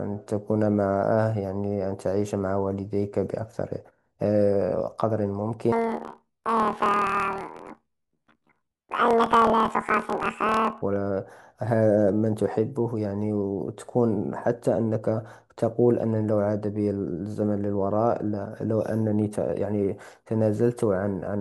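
A speech clip with a planar audio read as interleaved fault from 5.72 s to 10.83 s. Each block stores all left samples, then all right ones, but is read as alternating pairs. Every 26.1 ms block plays twice at double speed. The speech jumps an octave and flutters at about 38.3 Hz, while its overall pace stays correct.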